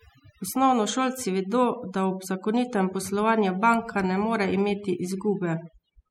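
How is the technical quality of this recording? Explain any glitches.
The recording suffers from overdone noise removal. It runs through the whole clip. A noise reduction stage was pushed too hard. It cuts individual frequency bands sharply whenever they sit close to its noise estimate. Quieter parts of the speech fall below that line and vanish too. The pauses drop and break up into twinkling, warbling specks.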